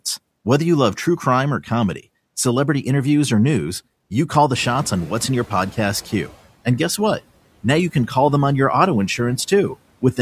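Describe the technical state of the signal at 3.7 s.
At 3.7 s the speech signal is intact, with no technical fault to be heard at that moment.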